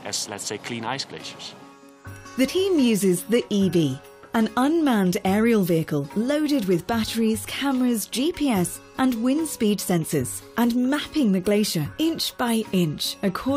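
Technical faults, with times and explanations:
2.47 s and 11.92–11.94 s, compressed frames skipped: whole compressed frames were lost before playback, either missing from the file or rejected by the decoder as damaged. The frame length is 23.2 ms, so the audio jumps ahead by about five frames, roughly a tenth of a second, at 2.47 s, and by about two frames, around 50 ms, at 11.92 s.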